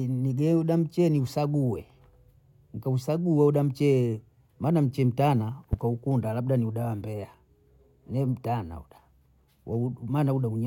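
At 5.73–5.76 s, just before "labda ni uba wa", a loud pop jumps roughly 10 dB over the speech, likely a switch or static spike.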